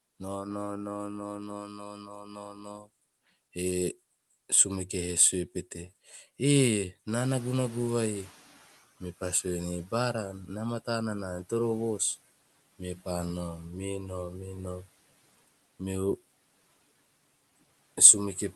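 Speech cut by the noise suppressor runs from 1.40 to 2.89 s. The suppressor mistook part of the speech for background and pulled it down with the noise, by as much as about 18 dB at the deepest point. Over about a second and a half, softer consonants and the tails of words sound swallowed and faint, as if the speech briefly slips away from the microphone.

Noise suppressor catching up starts at 7.20 s and lasts until 8.82 s. Around 7 s the room noise steps up by about 20 dB, and the suppressor's estimate of the background is still set for the quieter level. The louder noise therefore comes through with little reduction at first, then sinks over 1.62 s as the estimate adapts, ending up about 12 dB lower. The settled noise sits about 21 dB below the speech, and the whole clip has the top end limited at 12 kHz by the Opus call path.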